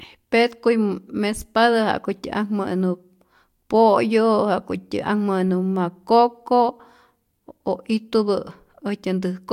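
No technical faults can be heard anywhere in the speech.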